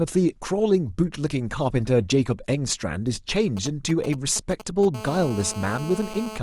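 From 3.57 to 4.85 s you get GSM signalling bursts: a nearby 2G phone's radio pulses rectified into galloping ticks and short 217 Hz buzzes, roughly 15 dB under the speech. Then at 4.94 s it settles into steady GSM phone buzz through 6.38 s, the phone now in a call, a hard raspy 217 Hz drone about 13 dB below the speech.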